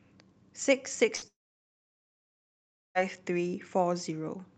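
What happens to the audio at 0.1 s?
Nothing goes wrong at 0.1 s: the speech there passes intact through the call path, carrying only the ordinary coding character of an Opus call.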